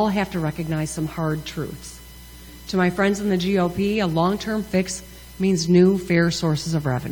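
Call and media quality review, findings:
Nothing to flag on this one: listened all the way along and didn't catch any glitches, dropouts or other trouble worth opening a ticket for.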